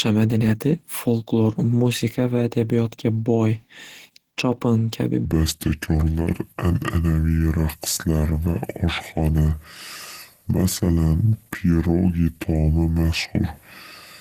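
Throughout, the speech sounds muffled, hoarse and grainy. This is likely Opus compression in its hybrid speech mode, at a low bitrate near 16 kbps.

From 5.25 s to the end, a section plays at the wrong speed, 0.693 times normal. Pitch drops about seven semitones, so the speech turns deep and slow, likely from a clock mismatch.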